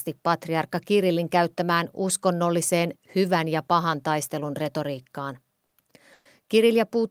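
Right after "ja pahan taistelun retoriikkaan", at 5.65 to 5.74 s, the speech smears into a brief held, fading sound and then jumps ahead. At 6.13 to 6.28 s a longer smear dies to about 10 ms of silence before resuming. Both are a burst of packet loss: consecutive packets never arrived, so the receiver stretched the last sound, about 60 ms and then 120 ms, and the same lengths of speech were skipped.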